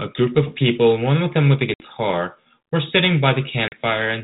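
Packet loss on an ADPCM call drops 60 ms of audio at 1.74 to 1.82 s and 40 ms at 3.68 to 3.76 s. Silence fills each hole, and the decoder's predictor and step size fall out of step with the sender's. The speech then resumes after a hard edge with brief distortion that settles within tens of milliseconds.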